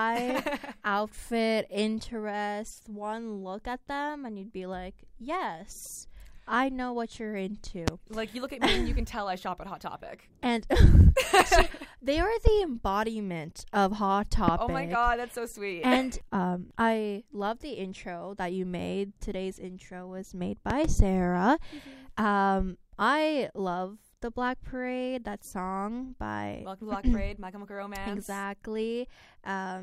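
A loud pop strikes at 7.88 to 7.90 s and again at 14.48 to 14.51 s, each a single sharp thump standing out roughly 20 dB above the sound. At 20.70 to 20.87 s, two pops land in quick succession, somewhat softer at around 15 dB. Each is likely a voltage step from a plug, switch or static discharge, briefly shaped by the following circuitry. Unlike a dropout, the sound carries on uninterrupted beneath each pop.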